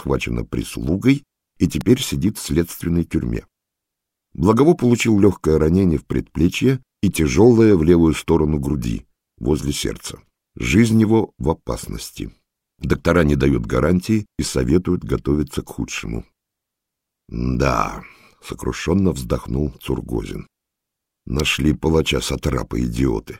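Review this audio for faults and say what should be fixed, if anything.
Two sharp snaps sit on top of the sound at 1.81 s and 21.40 s, each only a few milliseconds long and peaking around -10 dBFS. These are electrical switching spikes, likely from a nearby switch, motor or static discharge arcing briefly and coupling into the audio line. Keep switching equipment and motors away from the audio cabling, and use shielded, properly grounded cables.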